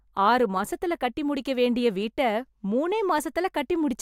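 Speech runs through a regular tick roughly once a second, about four clicks between 0.17 and 3.19 s. The likely cause is clock drift buffer slips: two unsynchronised clocks, around 150 ppm apart, force a handful of samples to be dropped or repeated at each slip.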